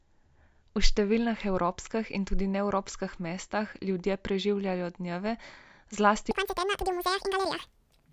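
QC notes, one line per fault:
6.31–8.12 s, wrong sample rate: the speech jumps to double speed and a full octave higher, consistent with 16 kHz material played back at 32 kHz without conversion.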